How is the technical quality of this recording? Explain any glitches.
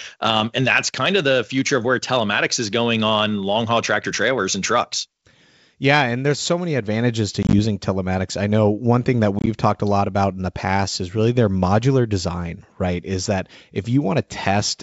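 The recording is marred by two bursts of packet loss on an ADPCM call; the G.722 wideband telephone coding itself comes through with clear wideband speech up to about 7 kHz, consistent with 64 kbit/s operation.

Packet loss on an ADPCM call, 7.43 to 7.54 s and 9.39 to 9.47 s: packets dropped out and were filled with silence, about 60 ms lost across 100 ms and then 50 ms across 80 ms, in runs of up to 20 ms, pointing to around seven and around five lost packets. Each gap desynchronised the decoder's adaptive predictor and step size from the sender's, so the speech breaks into hard-edged holes and resumes with brief, slight distortion before settling.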